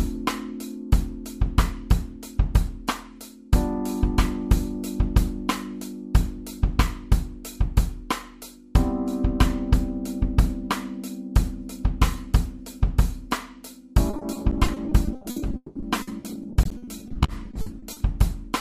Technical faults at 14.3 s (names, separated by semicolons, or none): repeated packet loss (robotic sound)